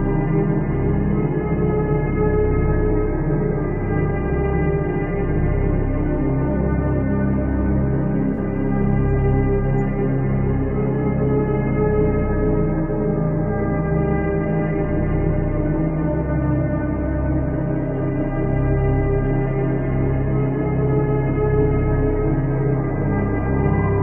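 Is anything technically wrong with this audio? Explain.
Yes. From 8.34 to 8.38 s there is a brief glitch. This is a corrupt frame concealed. Bit errors damaged one AAC frame, the decoder detected them, and it filled that stretch itself, either muting it or reusing the previous good spectrum with scrambled signs. The glitch's length of about 38 ms fits a single frame.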